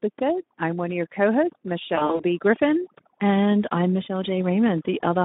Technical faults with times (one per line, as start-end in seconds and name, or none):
0.00-5.24 overdone noise removal
0.00-5.24 Speex codec
1.95-2.24 VoIP packet loss concealed by the speech codec